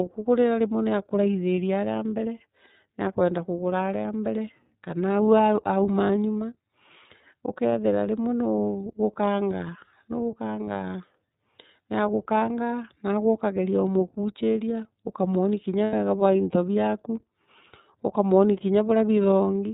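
The speech sounds band-limited and slightly rough and synthetic from start to finish, with nothing above 4 kHz and plainly audible coding damage. That is the iLBC codec at work. It is a narrowband VoIP coder that encodes each frame's excitation independently of the previous frame, and the character here fits its 13.33 kbps mode with 30 ms frames.

At 6.34 s, and again from 10.64 to 10.69 s, a brief buzzy hold replaces the speech, each fitting a single 30 ms frame gone missing. From 15.84 to 15.94 s, just before "bwa into braku", a longer held, breathy vowel-like sound fills the gap, which fits about three consecutive frames, roughly 90 ms. These are lost iLBC frames. The decoder repeats the last pitch cycle blended with noise to cover each gap. Because every frame decodes on its own, the speech is clean again immediately afterwards.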